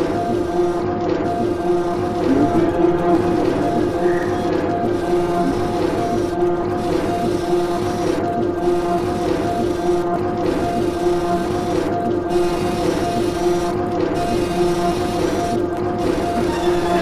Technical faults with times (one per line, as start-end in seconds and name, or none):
none